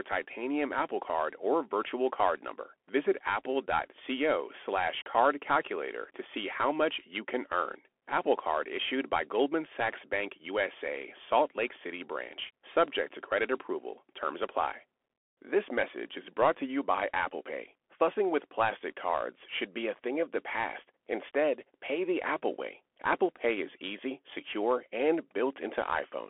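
From start to finish the speech runs through a Bluetooth CVSD headset codec. Everything above about 3.8 kHz is gone, leaving a thin 300 to 3400 Hz phone band. The one-bit slope coding can't keep up, so s sounds go scratchy and grainy hiss sits underneath.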